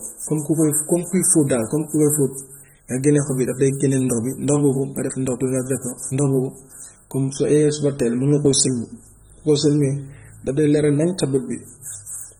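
Speech runs the whole clip with a dull, smeared quality and a warbling, fizzy texture on sustained sounds and sibilants, and nothing is present above 19 kHz. The codec damage is plainly audible throughout. The likely cause is AAC compression at a low rate, in the range of 24 kbps for AAC-LC, where quantising each frame's spectrum against a hearing model leaves gaps and swaps some bands for substitute noise.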